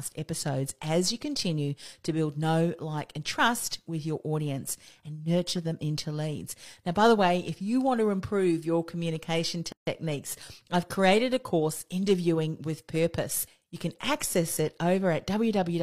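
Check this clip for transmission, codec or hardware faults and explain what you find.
One fault is present in this speech clip: a gap at a join of encoded pieces.

From 9.72 to 9.87 s the speech drops into a hole of about 150 ms of silence, then resumes exactly where it left off with nothing lost. The clip was evidently assembled from separately encoded segments joined without trimming, so one segment's padded final frame and the next segment's encoder start-up delay both remain. The gap's edges are smeared by the codec, so the truly silent part is shorter.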